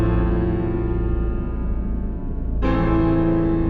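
No technical faults can be heard anywhere in it.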